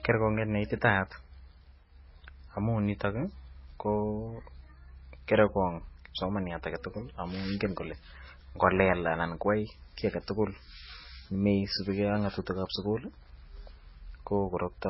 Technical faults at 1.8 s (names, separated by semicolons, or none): MP3 compression